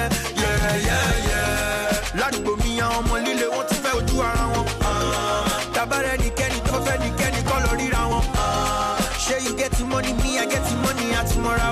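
Compressed frames were skipped four times, at 2.30, 3.93, 6.69 to 6.71 and 8.11 s. Each time the audio jumps forward, losing roughly a twentieth or a tenth of a second, which fits a few dropped frames of about 23 ms each.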